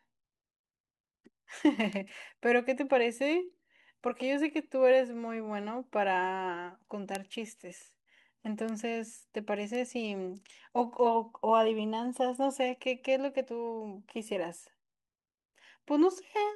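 At 1.93 s, 7.15 s, 8.69 s and 9.75 s the speech carries a bit error spike, a single flipped bit throwing one to three samples off by a power of two. Each is one sharp broadband tick, peaking at about -26, -8, -20 and -20 dBFS.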